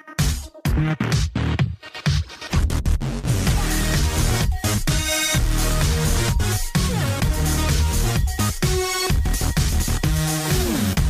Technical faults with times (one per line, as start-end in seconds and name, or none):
none